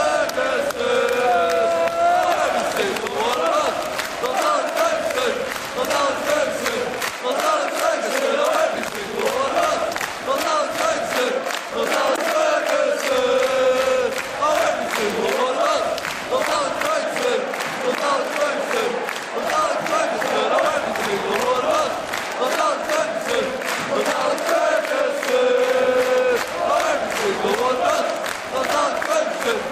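Computer activity noise runs through the whole clip as a buzzing, scratchy layer pulsing at around 70 times a second. It sits well below the sound, roughly 25 dB down. The computer's changing load on its processor, graphics or mouse shifts the ground that the audio circuit shares, so the interference follows that activity and has no relation to what is being recorded.

A corrupt frame decoded appears from 12.07 to 12.18 s, a burst of about a tenth of a second that sounds like a harsh chirp or blip. The damage spans a few consecutive compressed frames whose bits were flipped, and the decoder played them anyway. Misread gains and codes put energy at the wrong frequencies, and this short burst peaks around -5 dBFS.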